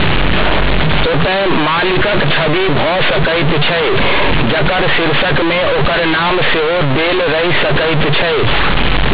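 Throughout this speech clip the sound is extremely loud and harshly buzzy, with quiet passages blown up to the level of loud ones and heavy noise filling the pauses. This is companded audio read as linear: mu-law bytes are played as plain 8-bit samples without expansion, so every sign change swings across about half the output range.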